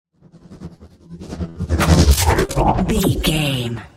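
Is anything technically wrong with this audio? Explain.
Yes, there are two dropouts. From 1.49 to 1.57 s there's a burst of packet loss: about 60 ms never arrived, so the receiver stretches and fades the last sound before jumping ahead. At 2.45 to 2.51 s there's a short concealed packet loss: a 40 ms hole gets patched by extending the preceding audio, which leaves a brief smeared blip.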